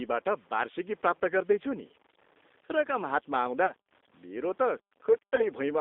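Throughout, the speech carries a grainy distortion that rises and falls with the sound itself, sitting roughly 35 dB below the signal, with quiet stretches turning gritty. This likely comes from low bit depth without dither, with samples truncated to around 8 bits so the rounding error tracks the waveform.

Also throughout, a G.729 codec has replaced the original speech with a low-rate model rebuilt from a vocal tract filter, a pitch predictor and a few pulses per frame, fitting an 8 kbit/s coder. The line passes only about 250 Hz to 3.7 kHz, so everything is thin and boxy, and the codec damage is plainly audible as a rough, slightly synthetic texture.

At 3.66 to 3.73 s and again at 5.35 to 5.43 s, about 30 ms of audio went missing each time, which fits a single lost packet. This is VoIP packet loss concealed by the speech codec: the decoder filled the gap by extending its last pitch and filter state. 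Each time the speech smears into a brief buzzy tone or coloured noise that fades, and it stays weak or distorted for a moment after real audio resumes.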